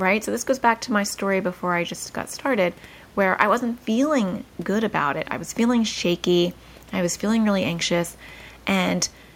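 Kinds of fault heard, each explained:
No audible technical faults in the speech recording: nothing to list.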